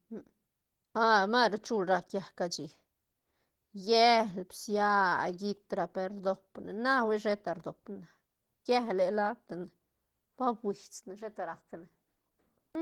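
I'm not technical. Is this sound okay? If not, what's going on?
No. The speech sounds muffled and hoarse from start to finish. That is plainly audible damage, likely from Opus compression squeezing the sound into very little data. The encoder rebuilds missing detail by copying lower sounds or adding noise.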